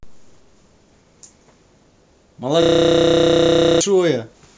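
A system hang loop runs from 2.62 s to 3.81 s. The computer or its audio driver stalled while the sound hardware kept replaying the same stretch of its ring buffer, so one 32 ms slice of the speech repeats exactly, dozens of times, which fits a 512-sample buffer. At a loop rate of 31.2 Hz this comes across as a rough, steady buzz in place of the speech, and about a second of the real audio is lost.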